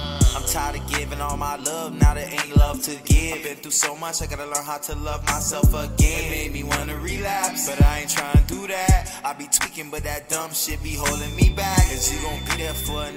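Feedback whistle from 11.02 s to the end: a thin 3.5 kHz tone about 20 dB down that slowly swells and fades, likely a loudspeaker-to-microphone loop poised at the feedback point.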